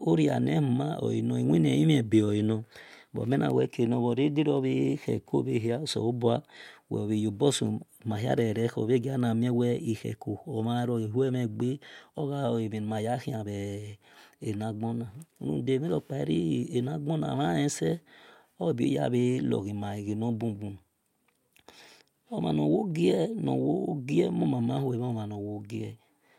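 At 4.57 s a single sharp click cuts through the speech, a thin vertical line across the spectrum with nothing missing around it. The likely cause is dropped samples: only a handful went missing, well under a millisecond, so the waveform jumps abruptly from one value to a later one. Unlike a dropout, no audible stretch of sound disappears and no silence or stutter follows. There is just the one isolated tick.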